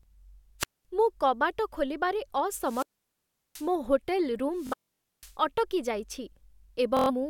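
Speech recorded through an analogue FM wireless microphone shows three wireless microphone squelch dropouts, at 0.59 to 0.85 s, 2.61 to 3.71 s and 4.54 to 5.36 s. As the RF signal fades, hiss rises, then the receiver's squelch gates the output to near silence, for about 215 ms, 730 ms and 500 ms respectively, before the voice returns. Bluetooth stutter is also present, at 4.67 to 4.74 s, inside the third dropout, and again at 6.97 to 7.10 s. Short slices of audio repeat with a buzzy, machine-gun texture while the receiver replays its last buffer in place of late or missing packets. In the first burst about 209 ms of audio goes missing, spread over roughly 370 ms, with the longest gap about 93 ms. The second loses about 116 ms. In both, playback then resumes further along, as if the sound had kept running.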